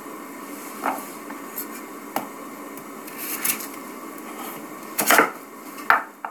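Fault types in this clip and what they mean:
No technical faults can be heard in these sounds.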